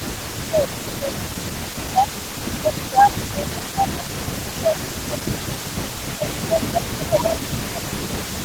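From the first moment to the end, a faint delayed copy of the speech trails behind it, about 20 dB down and lagging by 321 ms. This is echo leak, likely a far-end loudspeaker whose echo canceller let part of the returned signal through. Unlike suppression, it adds sound rather than removing it: a distinct delayed copy of the same voice arrives a third of a second late, not a reverberant smear.

Over the same stretch, from 0 to 2.11 s, the main speech itself sinks in patches totalling about a second and a half, falling by roughly 20 dB at its worst. This is speech suppressed in double talk. The canceller, likely unable to separate the talker from echo while both sides spoke, turned the whole signal down. The same dipping returns from 2.49 to 5.75 s, across about three seconds and by up to roughly 15 dB. It returns again from 6.15 s to the end, by up to roughly 20 dB. The giveaway is that the direct speech loses level, with nothing added on top.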